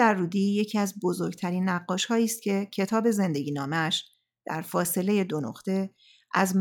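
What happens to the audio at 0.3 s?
Nothing goes wrong at 0.3 s: the speech carries on intact there, with no fault to be heard.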